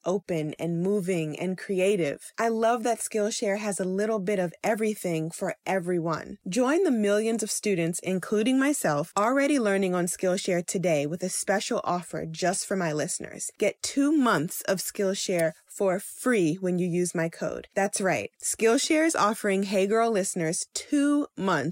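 No audible faults in this speech.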